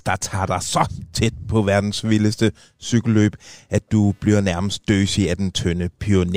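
Computer load shifting the audio circuit's shared ground adds computer activity noise to the speech, a faint buzz pulsing around 300 times a second, from 1.54 to 5.09 s.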